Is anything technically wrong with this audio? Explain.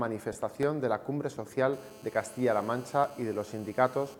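Yes, there are three kinds of fault.

Lost LE Audio frames, 0.33 to 0.35 s: about 20 ms of Bluetooth data went missing, consistent with two 10 ms frames. The decoder filled the gap with a randomised copy of the last spectrum, leaving a brief noisy smear.

Blocks of digital silence, at 0.63 s and 3.04 s: the output buffer was probably briefly left unfilled, for 1.33 ms and 2 ms. The first fits a 64-sample block. Each abrupt drop to zero and back is heard as a tick.

GSM phone buzz, 1.73 to 4.15 s: a nearby 2G phone on a call transmitted in bursts 217 times a second, and the audio circuitry rectified them. This produces a steady, raspy 217 Hz buzz, about 23 dB below the sound.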